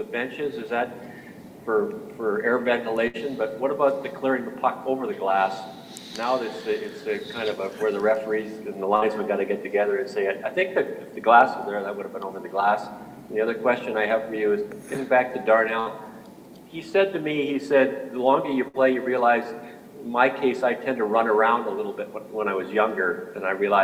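You'll catch four short bursts of packet loss at 3.07 to 3.17 s, 8.96 to 9.05 s, 15.80 to 15.89 s and 18.68 to 18.77 s. Each time a run of packets went missing, the receiver filled roughly 60 ms by stretching the last bit of sound and fading it down. Playback then picks up again about 60 ms further along, so a small piece of the audio is simply gone at each spot.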